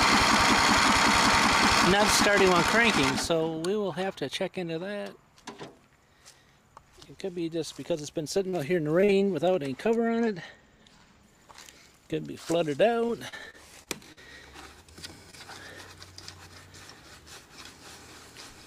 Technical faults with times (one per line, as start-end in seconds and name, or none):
8.49-8.55 short concealed packet loss
9.01-9.35 repeated packet loss (robotic sound)
10.07-11.23 channel delay (comb filtering)
13.07-14.19 repeated packet loss (robotic sound)
15.31-15.35 short concealed packet loss